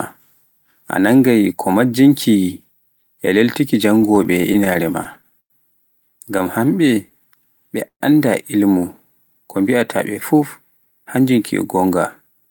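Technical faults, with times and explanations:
3.95–5.52 s, repeated stalls (stutter): the speech keeps catching and restarting, with 15 short hold-ups in about a second and a half, the longest around 103 ms. In each one the receiver stretched the last sound because packets were arriving late and the jitter buffer kept running dry, adding about 248 ms in all, roughly a sixth of that stretch. Nothing is lost. Unlike a smooth slow-down, the pace here is broken into jerky stops rather than evenly drawn out.
6.44–7.70 s, jitter buffer slow-down: the speech runs at about 90% speed with its pitch unchanged, so sounds are drawn out. The receiver was building up a reserve in the jitter buffer by repeating single pitch periods over and over, adding about 133 ms. That sets it apart from the stutter before it. The stretching is spread evenly and continuously, with no separate catches or restarts.
7.87–8.02 s, call audio freeze: the sound holds as a brief fading buzz or hiss and then drops to silence for about 80 ms before carrying on from where it stopped. 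This is likely a hold-up of packets on the network that emptied the jitter buffer, so the receiver filled about 129 ms and the delay grew by the same amount. Unlike the stutter, it is one single stop. Unlike the slow-down, there is an actual silent gap, not stretched sound.
10.71–12.49 s, jitter buffer speed-up: the speech runs at about 110% speed at the same pitch and sounds hurried, with roughly a fifth of a second taken out in total. The jitter buffer held more audio than it aimed for, so the receiver cut out short pieces of one or a few pitch periods again and again to bring the delay down. This mirrors the earlier slow-down. The change is an even compression rather than stretching, and there are no gaps or skips.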